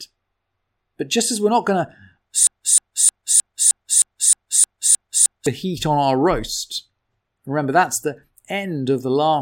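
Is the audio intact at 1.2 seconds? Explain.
Yes, at 1.2 seconds the speech plays through cleanly with no audible dropout, distortion, glitch or other fault.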